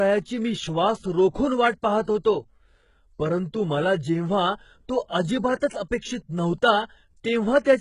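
From start to finish the speech carries heavy coding damage typical of HE-AAC compression at a very low rate, likely around 12 kbps. Nothing is present above 11.1 kHz, and the upper band that does exist sounds synthetic: the treble is rebuilt by copying lower bands upward under a coarse envelope, so its harmonics fail to line up with the coded range below. Sibilants come out gritty and lispy, with a metallic sheen over the top of the spectrum.

Between 2.02 and 2.08 s a pre-echo appears. A sharp onset lands late in a transform block, and the quantisation noise sized for that loud attack spreads across the whole block, including the quiet stretch before it. The result is a brief hiss of about 53 ms leading into the attack, which itself sounds softened and smeared rather than crisp.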